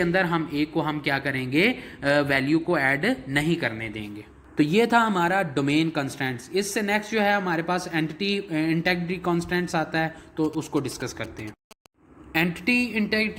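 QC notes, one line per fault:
10.45–11.86 s, GSM signalling bursts: galloping ticks and short buzzes at about 217 Hz, roughly 20 dB below the sound, from a nearby phone's radio bursts rectified by the audio circuit.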